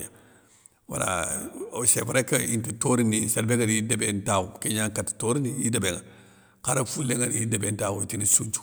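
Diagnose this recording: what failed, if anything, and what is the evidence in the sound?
Nothing failed; no faults detected.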